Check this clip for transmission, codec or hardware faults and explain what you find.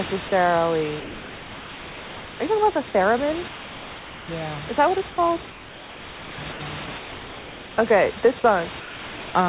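The speech has two kinds of transmission fault, both likely caused by the sender's voice activity detection. It comes through a narrowband call path with nothing above 4 kHz.

Sound dropped by the voice detector: at 0.28–0.32, 1.0–2.4, 3.48–4.28, 5.1–5.18 and 8.8–9.34 s, the detector treats speech as background and stops sending. The receiver fills each gap with steady comfort noise. The longest gap runs 1.4 s, and speech returns when the detector retriggers.

Sound chopped by the voice detector: from 5.5 to 6.6 s and from 6.86 to 7.78 s, the detector toggles repeatedly between sending and muting. Comfort noise replaces about 0.96 s and 0.82 s of those stretches. The speech sounds choppy.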